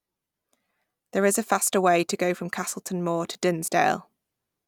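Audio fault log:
3.33–3.35 s chunks out of order: a 10 ms chunk arrived one chunk late and played after its successor, leaving three hard joins, heard as a brief jumbled moment.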